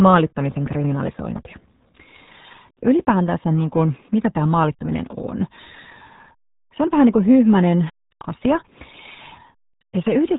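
From start to finish the speech runs through the RealAudio 14.4 codec, and the damage is heavy: nothing survives above 3.8 kHz, so it's muffled and gargly, with that dial-up-era smear that fits an 8 kbit/s stream squeezing everything down.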